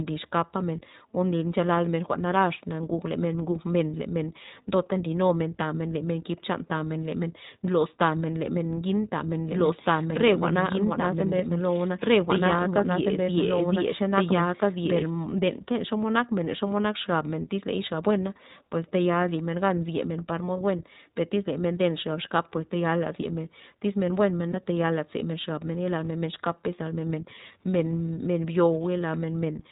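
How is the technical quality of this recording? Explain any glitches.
Technical quality is limited: the whole recording is bandlimited and coded, with a doubled passage and one brief dropout.

Throughout, the speech sounds narrowband, dull above 4 kHz and slightly rough and synthetic. This is the iLBC codec, whose plainly audible coding fits its 15.2 kbps mode with 20 ms frames.

From 9.52 to 15.10 s, just after "ngin tamen", a second, equally loud copy of the speech trails about two seconds behind, starting and stopping abruptly. This doubled audio track likely comes from a second, slower capture path.

At 24.52 to 24.56 s there is a short buzzy, held-vowel blip. These are lost iLBC frames: the decoder repeated the last pitch cycle over a gap that fits one 20 ms frame, then recovered immediately.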